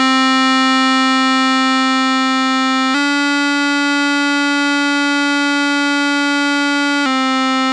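From 2.94 s to 7.06 s the music turns faster and brighter, running about 1.09 times quicker and roughly 1.5 semitones sharp. This is a wrong sample rate: samples played back unconverted at a higher rate, which fits 22 kHz material played at 24 kHz.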